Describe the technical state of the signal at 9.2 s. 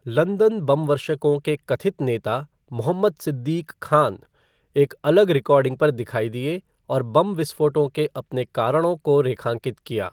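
At 9.2 s the audio is intact, with no fault at that moment; the speech passes through Opus voice compression in hybrid mode at 24 kbps with full bandwidth and only light coding damage.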